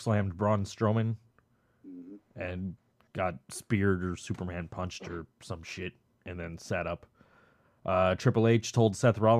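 Speech, with no audible faults.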